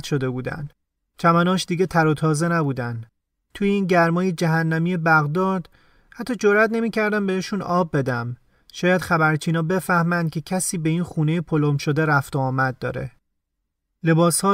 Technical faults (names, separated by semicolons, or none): none